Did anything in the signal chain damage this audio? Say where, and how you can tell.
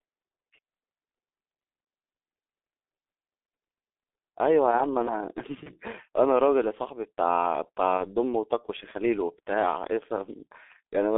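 Yes. At the codec stage, G.723.1 at 6.3 kbit/s muffles and roughens the speech throughout. The spectrogram shows energy confined to roughly 300 Hz–3.6 kHz, with smeared consonants.

At the network stage, VoIP packet loss concealed by the speech codec appears at 5.63–5.71 s and 7.97–8.02 s. Each time, one 30 ms frame is extrapolated into a fading buzzy tone or coloured noise, visible as a frozen spectrum and a shrinking waveform.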